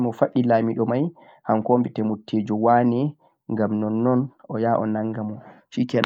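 The speech carries no audible technical fault at any point. There is nothing to place on a timeline and no event to describe.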